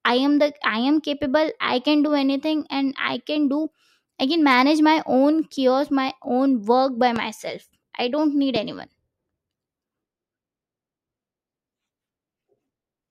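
At 7.16 to 7.19 s and again at 8.56 to 8.58 s, a single loud pop sits on top of the speech, each peaking roughly 10 dB above the surrounding signal while the talking continues underneath. Each is a brief sharp thump lasting a couple of hundredths of a second. The likely cause is a sudden voltage step or pulse, such as a connector, switch, static discharge or driver glitch, added to the signal and shaped by the circuitry that follows.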